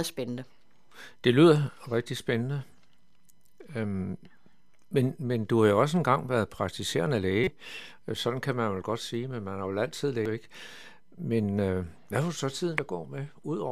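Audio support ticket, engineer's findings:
Damaged data in the compressed speech stream; decoder loses frame sync, resyncs at next header. Short glitches: 7.44–7.48 s after "også engang været praktiserende", 10.26 s, and 12.78 s after "øh hvad har".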